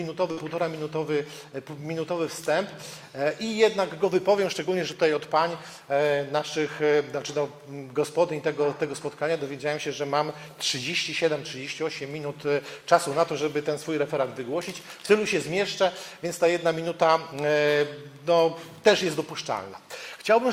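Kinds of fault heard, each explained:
Burst of packet loss: at about 0.31 s the sound stops moving forward and its last fragment is stretched out, held and fading for roughly 56 ms, until normal audio resumes near 0.39 s with about 60 ms of the original simply gone. Several consecutive packets failed to arrive in time, so the receiver filled the gap by extending and attenuating what it last had, then skipped ahead to the next packet it received.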